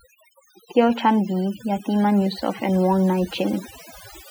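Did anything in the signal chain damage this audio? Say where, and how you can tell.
Yes. Overdone noise removal, at the processing stage, runs through the whole speech clip. Between phrases the background drops to near silence but keeps twinkling specks. The suppressor pushes individual frequency bands far down or off whenever they sit close to its noise estimate, taking quiet voice components along with the noise. A low-bitrate codec also sounds swirly, but it would leave the background noise in place rather than gating it to speckled silence.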